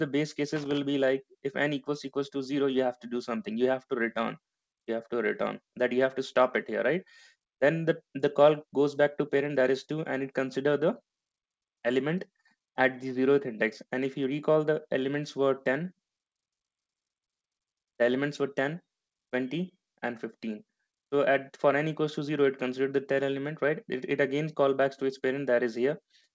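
Right at the start, from about 0.56 to 0.85 s, there's a short burst of loose connector crackle: a worn or dirty contact flickering open and shut, chopping the audio into scratchy pops. Everything sits below 8 kHz, which fits a wideband call codec like G.722.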